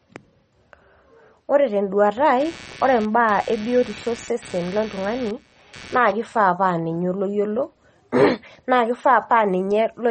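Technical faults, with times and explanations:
Throughout, MP3 compression: the speech sounds watery and swirly, with a dull top end where nothing is heard above 8.4 kHz. This is likely MP3 coding at a low bitrate, roughly 32 kbps. With so few bits, the encoder cuts the treble at a fixed frequency and drops weak frequency components, which then flicker on and off from frame to frame. That flickering produces the swirling texture, and the damage is plainly audible.
2.40–6.36 s, computer activity noise: a buzzing, chirping layer rises under the speech, pulsing roughly 150 times a second at around 20 dB below the speech level, then stops. It follows the computer's own activity, not the sound being recorded. Load changes in the processor, graphics card or mouse shift the ground that the audio circuit shares, and the recording picks up that fluctuation as the buzz.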